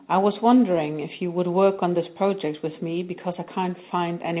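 Listening to this speech recording, nothing stood out as a technical problem.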